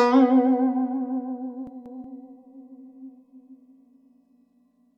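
Chunks out of order at 1.67 to 2.04 s: one 186 ms block of the music arrived one chunk late, so it plays after its successor, leaving a jumbled moment.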